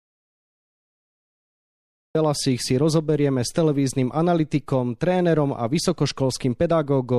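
From the very start until about 2.15 s the clip is an audio dropout to silence: plain silence with no room tone at all, so it is already under way when the recording begins. The speech then enters abruptly mid-flow at "si rozoberieme s televíznym". The dead-flat gap most likely comes from the input being lost, through a disconnected device, failed link or mute, while the recorder kept writing silence. Whatever was said during that stretch is unrecoverable.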